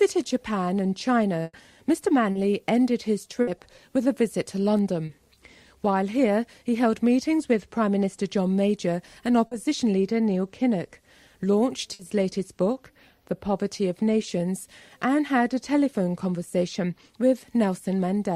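Burst of packet loss at 1.43 to 1.55 s: packets went missing, and the receiver stretched the last sound for 100 ms, fading it, then left about 20 ms of silence before the audio resumed with that stretch gone. Short concealed packet loss at 2.31 to 2.37 s: a 40 ms hole is patched by continuing the preceding sound and blending back, heard as a brief smear. Burst of packet loss again at 3.41 to 3.49 s, a 60 ms faded fill. Short concealed packet loss recurs at 5.05 to 5.11 s and 9.47 to 9.53 s, each a 40 ms patch. A final burst of packet loss at 11.93 to 12.01 s covers 60 ms.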